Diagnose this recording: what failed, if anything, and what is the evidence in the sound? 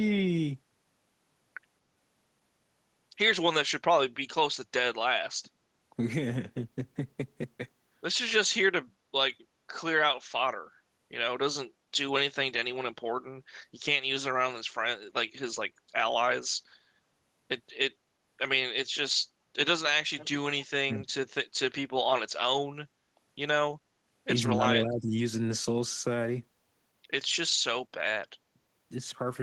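Background gated by the echo canceller, in call processing. At 5.42 to 5.54 s the room sound dips by about 11 dB, then returns once the canceller releases.

Echo leak, in call processing. At 20.17 to 20.28 s a faint copy of the speech returns 227 ms late, roughly 20 dB down. This is likely residue the echo canceller missed.

Speech suppressed in double talk, in call processing. At 20.86 to 21.02 s and 24.54 to 25.12 s the talker drops sharply, around 15 dB. The canceller likely ducked both sides.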